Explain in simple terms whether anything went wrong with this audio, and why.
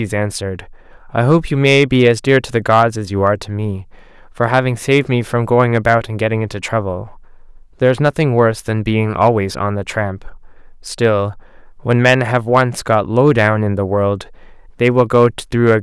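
Something went wrong: the recording was fed in louder than one stage of the system could handle, roughly twice as strong as its limit, so it suffered hard clipping from start to finish. Wherever the speech peaked, the tops of the waveform were simply sliced off flat. Only a small fraction of moments went over, well under one percent, so instead of constant fuzz you hear brief crackles and a rough edge on the loudest syllables.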